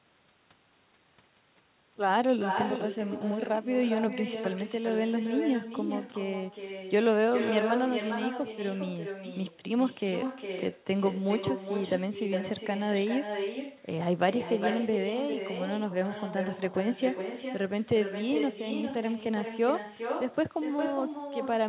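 A speech recording carried over a narrowband call path, with nothing above 4 kHz, which fits G.711 A-law. Echo with no canceller runs throughout: the far end's loudspeaker feeds its microphone and the speech returns roughly 0.4 s later, about 7 dB below the direct sound, thinner, trailing what the talker says.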